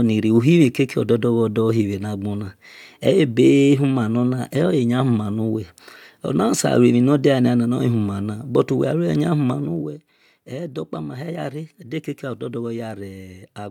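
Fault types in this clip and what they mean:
Zipper noise: a gain drop of about 10 dB is applied in coarse, unsmoothed steps, around forty a second, so each jump leaves a tiny click, and from 9.5 to 10.0 s the speech carries a brief ticking buzz as its level falls.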